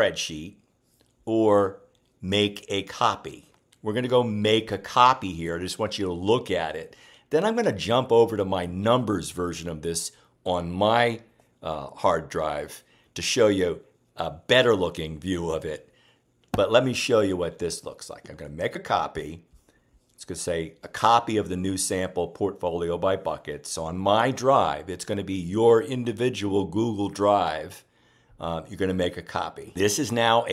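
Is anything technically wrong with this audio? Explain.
Yes. At 18.74 s there is a case of compressed frames skipped. A single compressed frame was never decoded, either because it was missing from the stream or because the decoder rejected it as corrupt. The audio therefore jumps forward by roughly 30 ms, which fits one frame of about 26 ms. At the splice the sound lurches slightly ahead.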